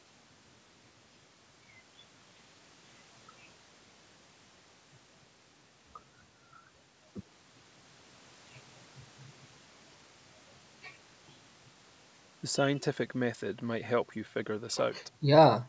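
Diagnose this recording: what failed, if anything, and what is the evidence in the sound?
Nothing in this recording failed.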